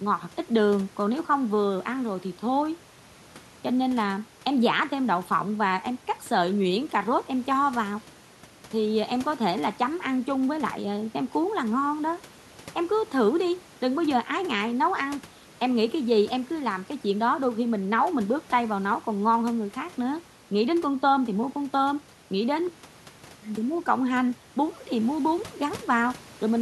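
No technical faults occur at any point in the clip, so there is nothing to describe in time order.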